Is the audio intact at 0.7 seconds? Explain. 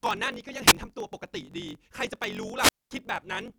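No. Two faults are present at 0.7 seconds. A wireless microphone squelch dropout runs from about 0.67 to 0.73 s. The radio signal fades, hiss and static swell, and the receiver's squelch shuts the output for a hole of only about 3 ms before the speech returns. The rising static before the gap sets it apart from a digital packet dropout, which cuts to silence abruptly with no noise leading in.

The block size mismatch (truncated) fault also runs through this moment, as it does across the whole clip. One stage writes longer blocks than the next stage reads, so the tail of each block is discarded. This leaves a buzz at about 46.9 Hz, which fits a 1024-sample read, and makes the speech run about 1.12 times fast at roughly its normal pitch. Because the pitch stays put, this cannot be a sample-rate mismatch, which would shift pitch along with speed.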